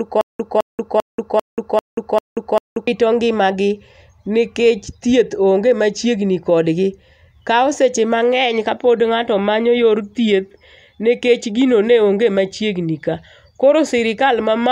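A speech clip that opens with a stutter with silent gaps, already under way at the start and running to 2.87 s. A 210 ms burst of sound repeats seven times. Each repeat is followed by about 184 ms of digital silence, giving an even cycle of 395 ms. The likely cause is a stalled player or stream that replayed its last fragment at each retry and then ran empty. The audio due in those gaps is lost.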